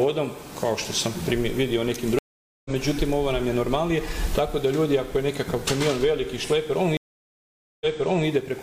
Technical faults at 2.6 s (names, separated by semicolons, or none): stream reconnect